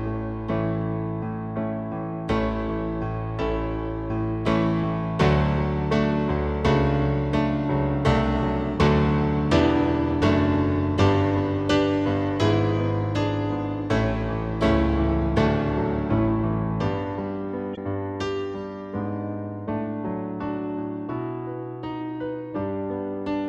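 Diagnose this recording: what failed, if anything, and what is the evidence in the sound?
The failure sits at the codec stage: damaged data in a compressed stream. From 17.73 to 17.78 s, a burst of about 55 ms breaks into the sound as a brief chirp or squawk. Corrupted bytes left the decoder unable to read those frames, so it lost sync and output garbage until it found the next valid frame header. A network dropout would instead leave a gap or smeared concealment, and an analogue fault would give a plain click.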